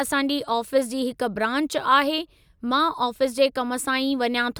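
No technical faults are audible.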